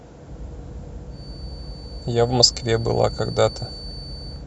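From about 1.07 s right to the end, there's a feedback whistle under the speech: a thin, steady tone near 4.5 kHz, roughly 20 dB below the voice and swelling and fading slowly. Likely a loudspeaker-to-mic loop sitting just at the edge of ringing.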